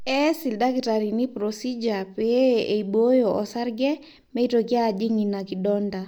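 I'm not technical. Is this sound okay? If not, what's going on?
Yes, this one's fine: there's nothing wrong to point out anywhere in the recording, so you can relax about it.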